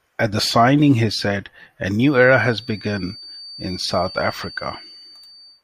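A speaker-to-microphone loop is likely sitting just at the edge of feedback, so this speech carries a thin, steady feedback whistle near 4.6 kHz, some 20 dB under the voice, from 1.98 s to the end.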